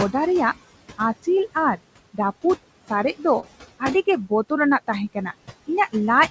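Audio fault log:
Throughout: noise suppressor artifacts. The suppressor cuts the steady room noise by about 19 dB, band by band, frame by frame. The noise sinks away in the pauses and rises again under the speech.
3.40–3.45 s: short concealed packet loss. About 20 ms of audio reached the decoder too late. The receiver covered 27 ms by extending the sound just before the gap, then blended back into the real signal. The result is a brief smear in the speech.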